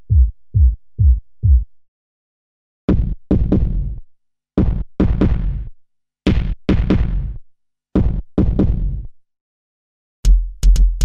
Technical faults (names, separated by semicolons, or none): crude rate conversion